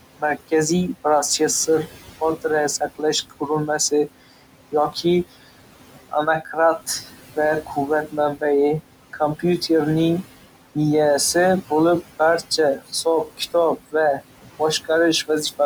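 From the start, noise suppressor artifacts run through the whole recording. The suppressor pulls down the bands it judges to be steady background by about 17 dB, frame by frame. The room noise, sitting about 15 dB under the speech, therefore drops away in the gaps and swells back beneath each phrase.

The same processing also produces speech cut by the noise suppressor in four stretches, where it mistakes quieter parts of the voice for noise. Between 2.8 and 5.25 s, about 400 ms in total is turned down by up to about 17 dB. Between 6.09 and 8.43 s, roughly 300 ms drops by up to about 18 dB. Between 9.13 and 9.7 s, around 100 ms falls by up to about 12 dB. Between 12.02 and 14.22 s, some 300 ms sinks by up to about 13 dB. In each stretch, the lowered speech comes out swallowed or faint.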